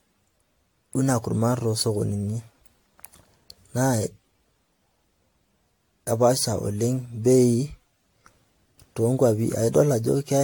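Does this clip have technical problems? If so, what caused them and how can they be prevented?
Yes. Generation loss runs through the whole recording: the speech sounds swirly, smeared and hollow, with blurred consonant attacks and nothing above 19.1 kHz. It was likely re-encoded about seven times with AAC-LC at what sounds like 96 kbit/s, each pass adding fresh quantisation noise on a shifted frame grid. To prevent it, edit from a lossless original and encode to a lossy format only once, at the final step.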